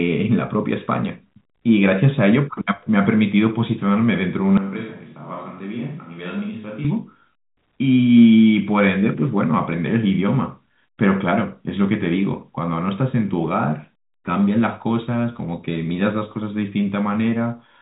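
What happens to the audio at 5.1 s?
A switch to a distant microphone runs from 4.57 s to 6.85 s, so 5.1 s falls inside it. The speech suddenly turns roomy and hollow, loses bass and drops by roughly 10 dB, while room noise rises to only about 30 dB below the speech. This is likely because the close microphone's feed was lost and a farther pickup took over. The change back at 6.85 s is just as abrupt, all within the telephone band that stops near 3.8 kHz.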